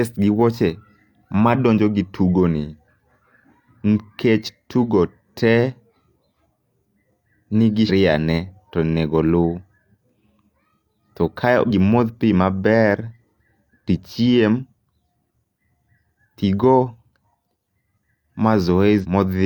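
Damaged data in the compressed stream makes the decoder misread frames and lose sync. Brief disruptions result at 7.85–7.91 s, just before "ne tonego", at 11.66–11.71 s, right after "to kae", and at 19.00–19.06 s.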